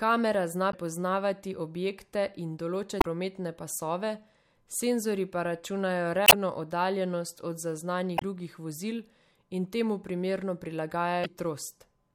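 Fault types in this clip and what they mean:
Damaged data in a compressed stream: corrupted bytes in the encoded speech make the decoder misread frames and lose sync until it finds the next valid header. Five short glitches of about 40 to 90 ms each replace the audio, including one between "objekte in" and "prometne pasove".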